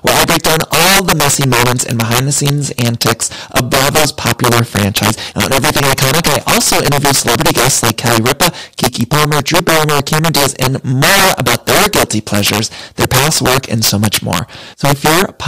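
Throughout the speech, integer overflow turns the loudest peaks into violent cracks: driven about 7 dB too hot, a small share of samples exceed the integer limit and wrap to the opposite sign, jumping across the full range instead of flattening as clipping would.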